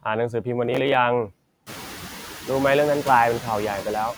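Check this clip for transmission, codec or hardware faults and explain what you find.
Two faults turn up in this speech clip: noise suppressor artifacts across the whole recording, and a burst of processor overload crackle early on.

The noise suppressor artifacts run from start to finish. The suppressor judges, frame by frame, which frequency bands hold steady noise and turns them down, here by about 5 dB. Because that decision keeps changing, the background dips in the pauses and comes back up underneath the speech. The effect gets easier to hear after about 1.5 s, when the room noise itself climbs by about 22 dB and settles roughly 14 dB below the speech. That room noise is part of the recording, not a system fault.

The processor overload crackle runs from 0.65 to 0.94 s. For those 0.3 s the processor fell behind and kept missing its deadlines for the very short audio buffers it handles. 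Each missed buffer was skipped rather than held, so the audio jumps forward with a hard edge each time. The rapid string of skips, around twenty, fits buffers roughly 0.7 ms long. It comes across as a short burst of gritty, tearing crackle laid over the speech, which stops as soon as the load eases.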